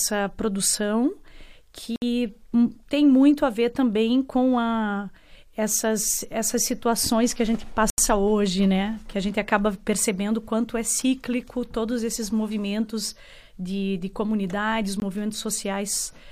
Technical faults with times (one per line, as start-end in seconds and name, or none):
1.96-2.02 block of digital silence
7.90-7.98 block of digital silence
15.00 block of digital silence